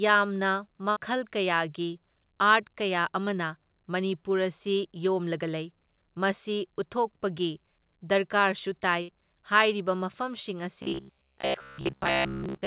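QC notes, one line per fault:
0.90–0.98 s and 9.02–9.10 s, burst of packet loss: the sound briefly freezes into a held, fading buzz or hiss for about 60 ms, then jumps ahead. A short run of packets never arrived, so the receiver stretched the last audio and skipped about 60 ms of the signal.
10.82 s to the end, robotic sound from repeated short buffers: the speech turns into a stiff, metallic drone pinned at about 67 Hz while still loosely tracking the speech. The likely cause is audio arriving too seldom, so a roughly 15 ms slice is looped, replacing most of the real signal.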